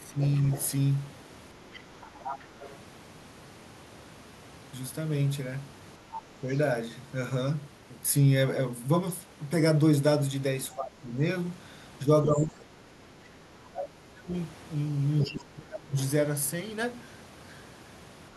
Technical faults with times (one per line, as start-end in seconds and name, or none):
0.06-0.20 speech suppressed in double talk
0.23-0.67 other side's voice leaking through
1.73-2.76 other side's voice leaking through
6.41-6.48 speech suppressed in double talk
6.52-6.57 other side's voice leaking through
10.74-15.97 speech suppressed in double talk
15.21-16.06 other side's voice leaking through